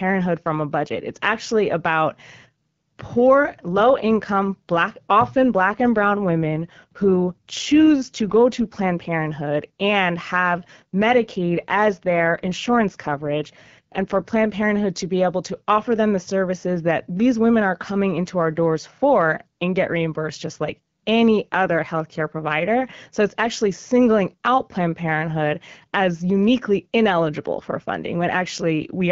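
Speech carried over a wideband AMR call, and twice it suffers an AMR rate drop: from 5.45 to 8.91 s, just after "poor low income black", and from 10.61 to 14.58 s, ending before "to be able to". The voice turns rougher and more synthetic, which fits the codec stepping down from about 12.65 to 8.85 kbit/s. A spectrogram shows no gap and an unchanged bandwidth, only blurrier, noisier harmonics.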